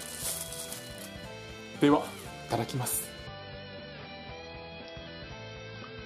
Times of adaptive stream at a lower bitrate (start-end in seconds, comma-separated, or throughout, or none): 3.27-6.05